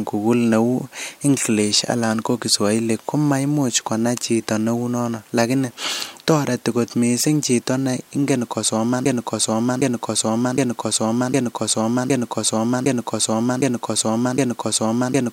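Speech, cut short by a broken-record loop from 9.06 s to the end of the clip: the player or stream likely stalled and kept resending the last fragment it held. What you hear is a 0.76 s slice of sound repeating exactly, back to back, eight times with no change, for the final six seconds or so. Whatever should have followed 9.06 s never arrives; that portion of the speech is simply lost.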